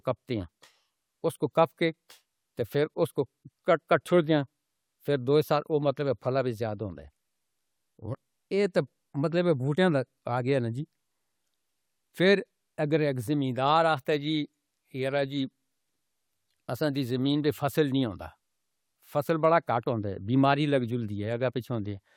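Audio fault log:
No faults heard anywhere in this speech recording.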